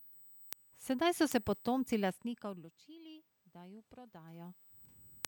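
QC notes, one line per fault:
Throughout, USB whine: there's a fixed, thin high tone under the speech, sitting at 8 kHz with its strongest part at 16 kHz, roughly 20 dB below the speech level. That's the 125-microsecond USB microframe rhythm leaking into the audio through the power or ground, so it lands right on 8 kHz and its multiples. It doesn't move with the speech, which is how you tell it apart from the room noise.
0.13 to 5.25 s, word clock ticks: there's a steady run of sharp little ticks, around fifteen of them, roughly every 0.4 s across almost the whole clip. The receiving end is running on its own clock, off from the sender's by something like 50 ppm, so every time the two slip a full sample past each other, one sample gets dropped or doubled and you hear a click.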